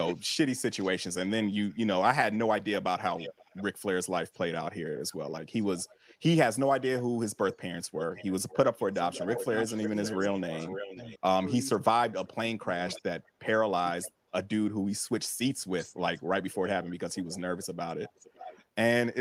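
From 0.07 to 11.17 s an echo leak follows the speech, a copy trailing by about 0.52 s and only about 10 dB quieter, likely a far-end echo canceller passing loudspeaker pickup back. The fixed half-second gap sets it apart from room reverberation. Between 10.16 and 14.24 s comes speech suppressed in double talk: about a second of the speech, in pieces, dips by up to about 30 dB while the other side is also talking, likely the canceller muting both. These are gaps, not added sound. Fainter echo leaks, about 20 dB down, return at 12.93–14.08 s with a 0.55 s delay and from 15.78 s to the end at 0.56 s.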